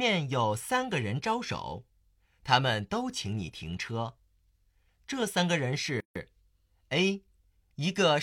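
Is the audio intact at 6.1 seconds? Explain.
No. At 6.1 seconds the speech sits inside a gap at a join of encoded pieces, a silence of about 150 ms from 6.00 to 6.16 s. Two separately encoded segments were butted together untrimmed, so one encoder's end padding and the next one's start delay both remain. The silence has smeared edges, and the speech resumes where it stopped.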